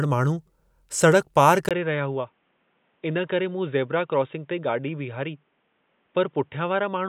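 Speech that goes dull and boxy at 1.69 s, after a brief 20 ms gap, and stays that way to the end: nothing above 3.8 kHz, a few dB quieter, with a faint new noise floor. That's likely the input switched to a poorer device.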